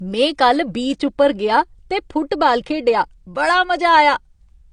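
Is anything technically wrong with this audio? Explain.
Yes. Throughout the speech there are artefacts of heavy compression. The fault is most likely low-bitrate audio saved at a high bitrate. The sound points to a first encoding at around 32 kbit/s, probably AAC-LC. It was then encoded again as MP3 at a generous rate, such as 192 kbit/s. The second encoder kept what it received. It could not restore the detail the first encoder had thrown away.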